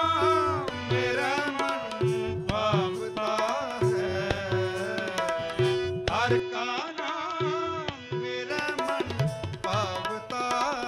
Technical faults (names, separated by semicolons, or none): input switched to a poorer device